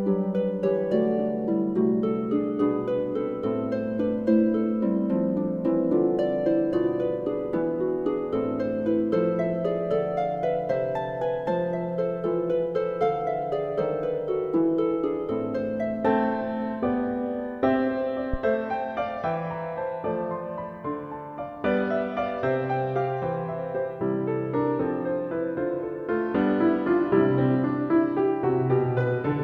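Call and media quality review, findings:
Phantom power thump at 18.34–18.39 s. Deep low thud, peak about −15 dBFS, decays in 13 ms. Probable component: mic input coupling capacitors. Supply switched while input live. Voltage step passes through the capacitors as a transient.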